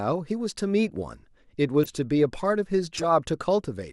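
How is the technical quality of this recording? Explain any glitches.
The speech has two short decoding glitches. Corrupt frame decoded, at 1.84 to 1.90 s and 2.97 to 3.05 s: damaged compressed data was decoded anyway, so misread values put energy at wrong frequencies. Each is heard as a brief chirpy burst, the second longer, spanning several frames, and louder.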